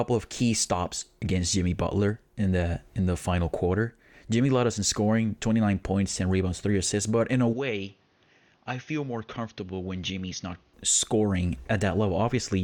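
At 7.53 s, right after "assists but in a", the speech turns dull and boxy. Nothing reaches above 6.6 kHz. The level falls by about 10 dB, with a new noise floor roughly 35 dB down. There is no gap. The likely cause is the input switched to a poorer device, until 10.74 s.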